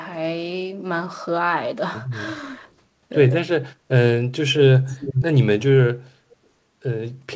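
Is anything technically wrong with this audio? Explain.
Yes. From 4.87 to 5.25 s there's an echo leak: the speech comes back 410 ms late, only a little quieter than the original, then a very faint scrap at 6.31 s. Likely a far-end loudspeaker whose echo canceller let its own pickup through.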